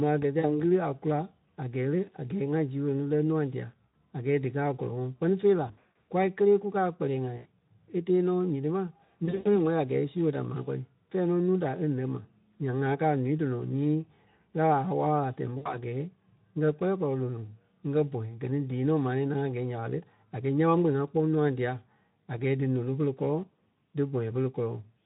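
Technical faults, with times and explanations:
0.39–0.58 s (after "a gɛ ti"), 3.86–3.94 s, 5.67–6.06 s, 7.37–7.47 s (between "kélee kukaa a" and "e tee"), 9.25–9.58 s (after "nyiti ma", before "wɛ́li a gɛɛ e"), 15.57–15.77 s: VoIP packet loss concealed by the speech codec. Gaps of 40 to 240 ms are filled by the decoder repeating its last pitch and filter at falling gain. They are heard as buzzy, smeared stretches that fade. The 5.67 s and 9.25 s gaps are scattered losses with runs up to 100 ms. On a spectrogram, frozen harmonic stripes fade out, and the waveform shows a decaying envelope followed by a weak recovery.
1.81–3.73 s: mains buzz. Interference at 50 Hz, about 40 dB below the signal, adds a steady raspy buzz. Sharp spikes twice per mains cycle create harmonics reaching into the kilohertz range. A spectrogram shows evenly spaced horizontal lines at 50 Hz multiples, and the waveform shows a regular 100 Hz spike pattern under the signal.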